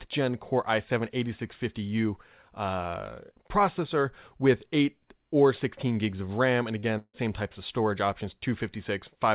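At 6.80 to 6.86 s there is a short concealed packet loss. About 30 ms of the speech never arrived in time, and the receiver covered the gap by extending the preceding sound for roughly the same span before blending back into the real signal. It is heard as a brief smear or wobble. On a spectrogram the sound runs smeared across the patch, and the waveform shows a smoothed continuation where the detail should be.

From 6.98 to 7.16 s the speech breaks off again, most likely from a long network dropout. About 150 ms went missing. The receiver stretched the last sound into a continuation that fades, leaving about 30 ms of silence before the speech resumes further on, with that stretch lost. A spectrogram shows a frozen, decaying sound ending in a dark gap. In the waveform, a tapering envelope drops to a flat line. The band stops at 4 kHz throughout, consistent with a G.711 A-law call path at 64 kbps.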